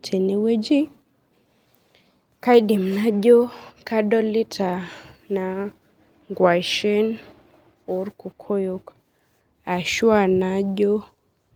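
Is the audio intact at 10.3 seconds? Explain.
Yes, the audio at 10.3 seconds is intact, with nothing there that breaks or disturbs the sound.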